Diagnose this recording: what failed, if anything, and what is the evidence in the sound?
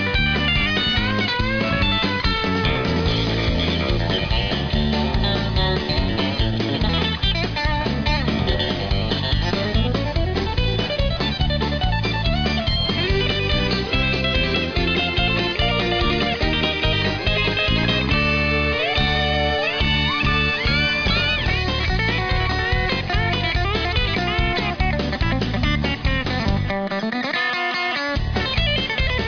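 Nothing failed; no faults are audible anywhere.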